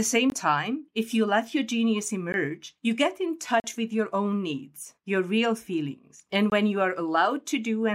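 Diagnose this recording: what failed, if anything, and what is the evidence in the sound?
The speech cuts abruptly to dead silence four times. The first gap runs 0.30 to 0.32 s, just before "time if you let". A tick comes at 2.32 s, and the longest hole, 40 ms, falls at 3.60 to 3.64 s between "you get in" and "with your own needs". The last is 6.50 to 6.52 s, before "when you are". These are blocks of digital silence, likely from the driver or buffer stage. The output buffer likely wasn't filled in time, so zeros replaced the samples with no fade.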